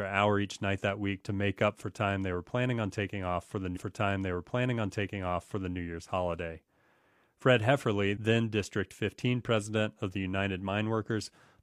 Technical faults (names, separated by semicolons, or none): stream segment repeated